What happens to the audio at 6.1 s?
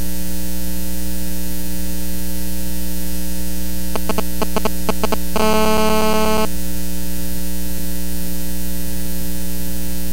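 A hard, raspy buzz at about 217 Hz, thick with harmonics and unrelated to the audio, holds steady from 5.40 s to 6.45 s, only about 3 dB below the signal. This is GSM phone buzz: a nearby 2G phone on a call pulses its transmitter 217 times a second, and the audio circuitry rectifies those radio bursts.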